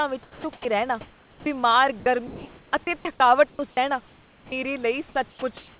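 A short speech recording, heard through a call path with nothing above 4 kHz (consistent with G.711 telephony coding), shows sound chopped by the voice detector in two stretches, from 0.23 to 1.46 s and from 2.0 to 4.52 s. Within them the voice repeatedly breaks off, and about 780 ms and 1.08 s respectively of real signal give way to a smooth synthetic hiss before the voice resumes. The holes filled by that hiss, rather than clicks, warbles or stretched syllables, set it apart from packet-loss concealment, and it is likely the sender's voice detector toggling transmission as quiet syllables fall under its threshold. At 5.3 s comes sound dropped by the voice detector. Roughly 90 ms of sound is lost and 120 ms of steady noise stands in, until 5.42 s. Here the sound simply ends early instead of stuttering, which is what separates a single drop from the choppy stretches. From 5.3 s to the end, comfort noise in place of the background takes over for about 350 ms. 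The room noise, sitting about 33 dB below the voice, turns into a featureless, even hiss lacking the texture it had earlier. That constant character, unlike an abrupt mute or a noise gate closing to silence, likely marks receiver-generated fill after transmission paused.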